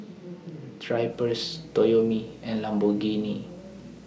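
Speech clip with video or display buzz from 1.11 s to the end. A 60 Hz field-rate buzz with hash above it sits well below the voice.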